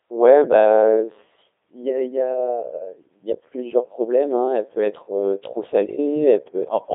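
The whole clip runs through the Codec 2 vocoder, and it sounds like it, heavily buzzy and robotic, squeezed into roughly 300 Hz to 3.7 kHz. Only pitch, voicing, energy and a rough spectral shape survive, rebuilt from sine waves, and that thin result fits something around 2.4 kbit/s. Then from 5.86 to 5.98 s come bit errors on digital voice radio. The synthetic voice suddenly lurches in pitch, level and colour and breaks into a short warbly bleep. That's what a few corrupted frames sound like, each flipped bit scrambling frame parameters, at an error rate of a couple of percent.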